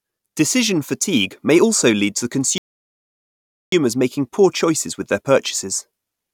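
Speech that halts abruptly at 2.58 s and sits in dead silence until 3.72 s, then picks up exactly where it left off: a rebuffering stall. The player exhausted its downloaded audio and waited for more data, so nothing is skipped, but about 1.14 s of time is inserted. On a waveform this shows as a flat line splitting the speech. On a spectrogram it is a clean, full-band blank column with no decay or smearing at either edge.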